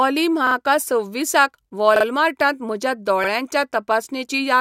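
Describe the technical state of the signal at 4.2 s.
At 4.2 s the speech signal is intact, with no dropout, clipping, distortion or other fault.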